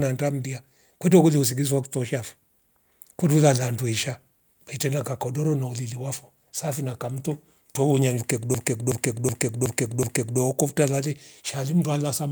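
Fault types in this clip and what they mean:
System hang loop: the system froze while the hardware kept replaying its buffer, so a 0.37 s chunk after "safi na kamto twohonya" stutters five times.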